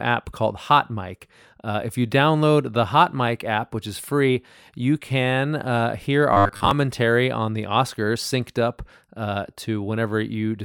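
From 6.33 to 6.71 s, between "you can uh hear" and "on the", robotic sound from repeated short buffers: a rigid 100 Hz metallic buzz, likely from looping 10 ms of audio, unlike dropouts' silent gaps.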